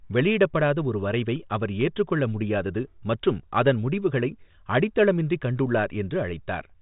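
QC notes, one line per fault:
Throughout, the speech sits in a telephone band with nothing above about 3.8 kHz, and the 40 kbit/s ADPCM coding leaves at most a faint trace.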